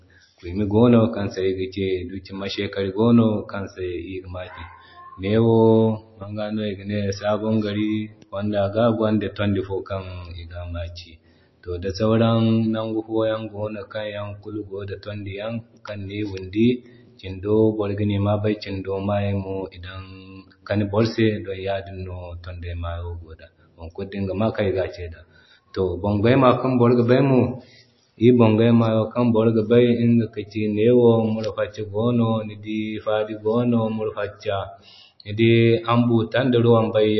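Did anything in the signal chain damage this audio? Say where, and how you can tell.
Yes. Throughout, the speech sounds watery and swirly with nothing above 5.8 kHz, likely from MP3 compression at the codec stage, which fits a bitrate near 26 kbps.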